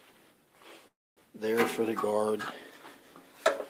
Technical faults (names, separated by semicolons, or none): call audio freeze